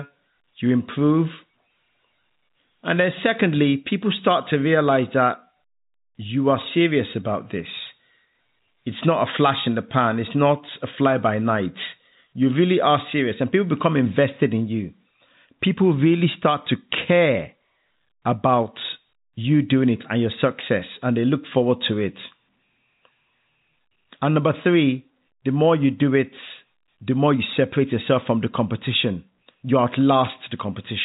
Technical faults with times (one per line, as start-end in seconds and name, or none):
none